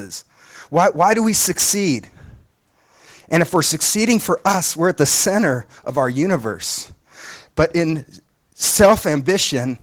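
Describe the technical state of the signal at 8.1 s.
At 8.1 s, as across the whole clip, Opus voice compression is plainly audible. Speech comes out hoarse and slightly robotic, which fits a low bitrate around 16 kbps. A linear-prediction core with a coarse upper layer reaches about 20.1 kHz, and on a spectrogram that upper band looks blotchy in 20 ms blocks.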